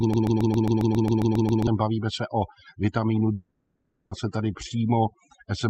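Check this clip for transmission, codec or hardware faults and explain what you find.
Three faults are present: a repeating loop at the start, a long gap in the middle, and heavy noise suppression across the whole clip.

From 0 to 1.67 s, already under way when the clip begins, a broken-record loop plays. The stream likely stalled and kept resending the last fragment it held, so a 135 ms piece of speech repeats exactly, back to back, eleven times, and the speech that should have played there is lost.

From 3.33 to 4.13 s there is a long network dropout, likely from audio packets failing to arrive. The receiver filled almost all of the 780 ms gap by stretching the last sound into a fading buzz or hiss, leaving only about 10 ms of true silence before the speech resumes further on, with that stretch missing.

Throughout, overdone noise removal is audible. The noise reduction is set far too strong, so it pulls individual frequency bands down whenever they sit near its noise estimate and takes quieter parts of the speech with them. 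The background drops and breaks up into twinkling specks.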